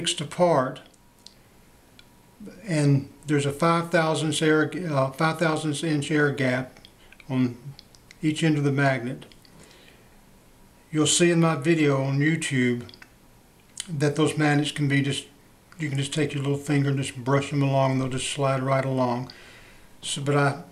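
Nothing goes wrong anywhere in this audio; there are no dropouts, glitches or other technical faults to point to from beginning to end.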